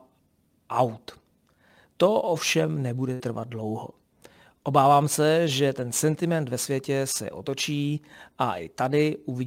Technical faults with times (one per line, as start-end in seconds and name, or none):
3.13-3.23 burst of packet loss